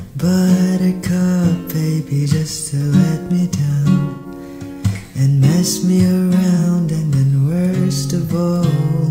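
A smeared, phasey patch at 4.10 to 4.26 s and a briefer one at 6.58 to 6.63 s are AAC frame loss with concealment, the decoder rebuilding missing frames from the last good spectrum.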